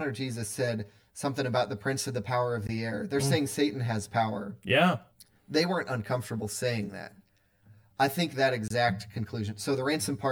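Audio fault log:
Throughout: channel delay (comb filtering). One channel runs roughly 10 ms behind the other, and summing them to mono cancels shared content at evenly spaced frequencies starting around 50 Hz, which gives the speech a hollow, phasey colour with fixed spectral notches.
2.67 s and 8.68 s: gap between stream segments. After "of the power of" and after "I think that", hard-edged silent holes of about 17 ms and 23 ms appear. Segment timestamps six seconds apart leave small gaps that the player fills with silence, so nothing is lost.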